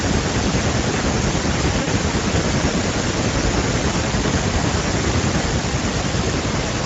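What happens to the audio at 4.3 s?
At 4.3 s you're hearing the Speex codec damage that runs the whole clip: its CELP coding is starved of excitation bits, so the speech sounds hoarse and noisy, consistent with a setting around 16.8 kbps.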